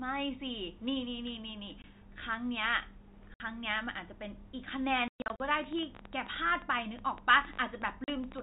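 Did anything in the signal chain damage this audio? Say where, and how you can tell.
Yes, the network stage dropped audio. There are silent holes with hard edges at 1.82 s (20 ms), 3.34 to 3.40 s (60 ms), 5.08 to 5.40 s (220 ms missing across 320 ms, longest run 120 ms) and 8.04 to 8.08 s (40 ms). That's packet loss filled with silence. Every gap is a multiple of 20 ms, which fits 20 ms packets.

There's also a train of clicks from 5.60 s to 8.40 s, around forty of them at about 12.5 per second. They're irregularly spaced, alike in shape, and peak around 10 dB above the signal. It's likely interference from nearby equipment or a faulty connection or power supply at the analogue stage.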